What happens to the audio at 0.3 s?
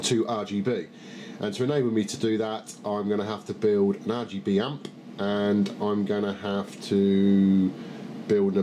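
Nothing goes wrong at 0.3 s; the audio plays through that moment intact, with no dropout, click, distortion or other fault.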